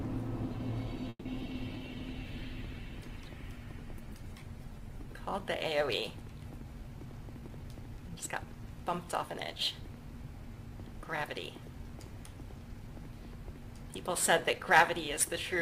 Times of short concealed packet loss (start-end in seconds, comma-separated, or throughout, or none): 1.39-1.47